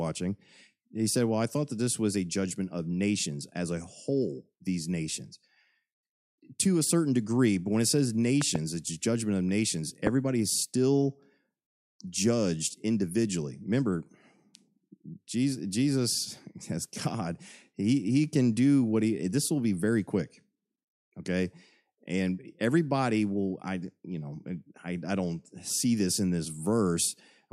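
At 8.42 to 8.58 s, two loud pops land in quick succession, roughly 15 dB above the speech. At 10.07 to 10.09 s comes a single, louder pop, near 20 dB above. Each is a sudden electrical pulse, likely from a plug, switch or static, and the speech carries on underneath.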